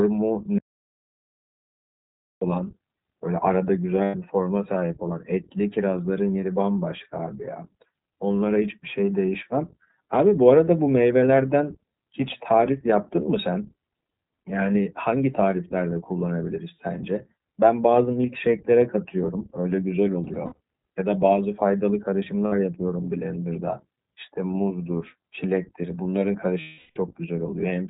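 Throughout, the iLBC codec is plainly audible. Nothing above 4 kHz survives, and the speech sounds rough and synthetic, which fits a 15.2 kbps iLBC coder.

From 0.59 to 2.41 s, an audio dropout to silence cuts about 1.8 s to total silence. The input was likely lost mid-flow.

Lost iLBC frames follow. At 4.04 to 4.16 s, 100 ms becomes a held, buzzy vowel. From 20.24 to 20.60 s, 200 ms of gaps are scattered, with the longest run around 70 ms. Around 22.46 s there is a brief 60 ms patch. From 26.60 to 26.98 s, 360 ms of the last pitch cycle repeats and fades. The speech recovers almost at once after each one.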